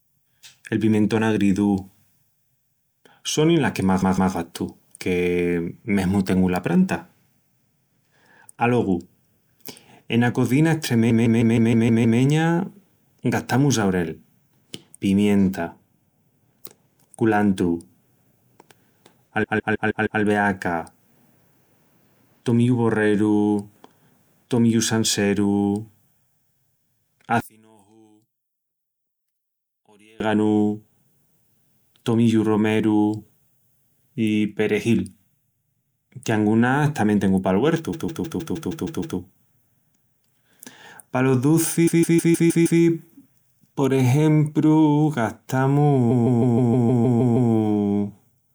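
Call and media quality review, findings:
Repeated frames: stutter at 4.01–4.33 s (after "sonin las que más"), 11.09–12.19 s (after "ena cozina"), 19.43–20.21 s, 37.92–39.17 s, 41.86–42.80 s and 46.10–47.51 s. The same 156.7 ms block replays 2, 7, 5, 8, 6 and 9 extra times, which fits six 26 ms codec frames being resent. These events add about 5.8 s of length in total. On a waveform the same envelope repeats back to back, and a spectrogram shows identical tiles.

One channel inverted: from 27.40 to 30.20 s the mono sum drops about 31 dB. The centred speech nearly vanishes, leaving a faint residue. This is likely a polarity flip on one stereo channel in the downmix path, so the common content cancels and only the inter-channel difference remains. On a waveform this shows as a sharp amplitude notch across that span, and a spectrogram shows a near-blank band.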